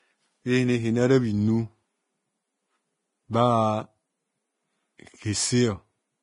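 A speech recording with heavy Vorbis compression artefacts throughout: nothing remains above 10.6 kHz, and the treble below that turns hissy and grainy, likely from coarse Vorbis coding at a low rate near 26 kbps. A simple low-pass filter would cut cleanly, not leave this noisy, roughened top end.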